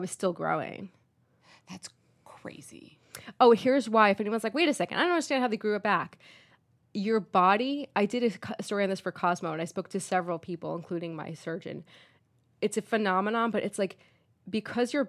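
Speech recording, no technical faults detected.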